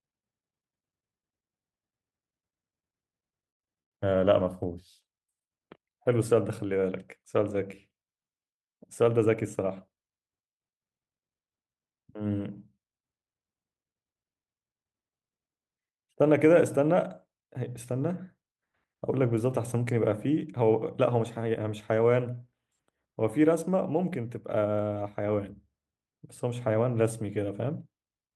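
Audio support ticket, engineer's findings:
Two brief dropouts into silence, 3.49–3.65 s and 3.81–3.95 s, each about 0.12–0.14 s. Audio resumes where it stopped, nothing lost, delay grows by the gap. Call audio freeze, likely late packets draining the jitter buffer empty.

Hurried delivery, pitch unchanged: 9.17–9.89 s at 107% speed, around 50 ms trimmed; 22.67–23.08 s at 114%, around 70 ms trimmed. Jitter buffer speed-up: receiver cutting pitch-period slices repeatedly to shed excess buffered delay.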